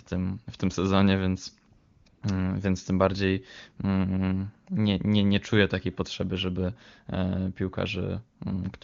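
Right after "w tym sezonie więc", AMR comfort noise fills 1.77–2.05 s and 2.09–2.21 s: smooth synthetic hiss replaces the background while the wideband codec is paused.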